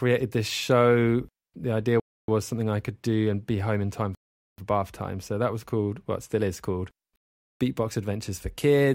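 The speech cuts to dead silence three times and then resumes: at 2.0 s for 0.28 s before "was something I could", at 4.15 s for 0.43 s between "be home in time" and "for bath time", and at 7.16 s for 0.45 s after "it still is called". Each gap is likely a Bluetooth stall: interference held back packets until the headphones' buffer ran empty.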